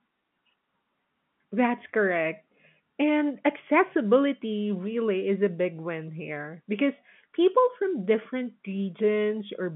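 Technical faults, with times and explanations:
No faults found; the speech is confined to a telephone band of about 150 Hz to 3.4 kHz with nothing above 3.8 kHz, consistent with normal G.711 mu-law telephone coding.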